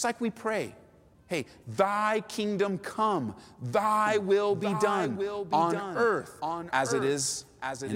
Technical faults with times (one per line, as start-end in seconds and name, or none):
4.06-7.95 doubled audio track